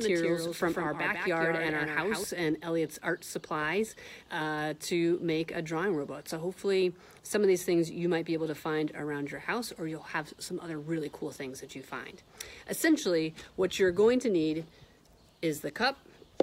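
From the opening until 2.24 s, the audio carries a doubled audio track: a second full-band copy runs roughly 150 ms behind the original and sits about 5 dB lower. It is already present when the clip begins. The trailing copy is dry, with no decay or room colour, so it reads as a hard slapback rather than reverberation. At 2.24 s it drops out abruptly. The likely cause is the same signal being captured again through a slower path, or an edit leaving two offset copies.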